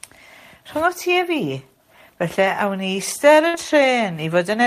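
At 3.47 s a burst of packet loss interrupts the speech for about 70 ms, ending near 3.55 s. The receiver stretches the last sound and fades it out instead of falling silent, which separates it from a plain dropout, then resumes with audio missing.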